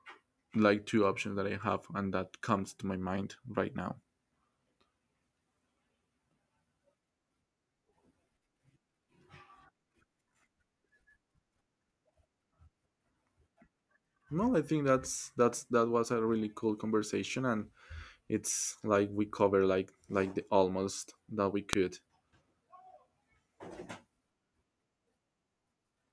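At 21.73 s, just after "that we", a sharp, loud click cuts into the speech: a file header played as audio. A WAV header was left in place where two pieces were joined, so its bytes were read as samples, producing a brief snap unrelated to the surrounding signal.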